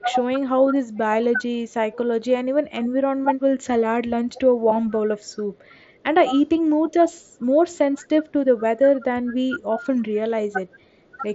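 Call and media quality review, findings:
Speech suppressed in double talk: 0.00–3.28 s, 4.21–5.74 s, 6.77–11.18 s. Level dips of about 20 dB, then about 15 dB twice, totalling roughly half a second, under half a second, and under a second. Likely the echo canceller gating near-end speech while far end talks. Waveform: notched envelope. Spectrogram: thinned highs in the dips.

Echo leak: 1.94–2.83 s, 7.41–8.03 s, 8.95–8.99 s. Faint delayed copy 443 ms behind, about 25 dB, then about 30 dB below speech. Likely residual loudspeaker echo passing the canceller. Spectrogram: weak repeated formant traces shifted 443 ms.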